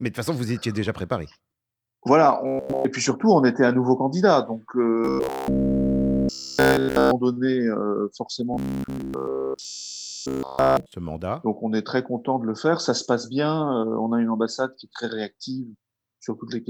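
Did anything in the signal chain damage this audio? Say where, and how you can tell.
Yes: robotic sound from repeated short buffers at 2.47–2.85 s, 5.05–7.13 s and 8.54–10.92 s, heard as a rigid metallic buzz fixed at 66.8 Hz. This is likely a driver or buffer-stage underrun, looping about 15 ms of audio while nearly all new material is skipped.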